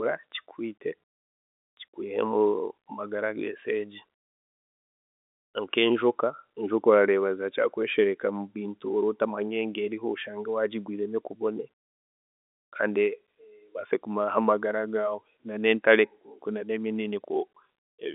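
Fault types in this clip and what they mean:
No faults found in this speech; it is carried as telephone-grade G.711 coding, with the line band running from about 250 Hz to 3.7 kHz and nothing above 3.8 kHz.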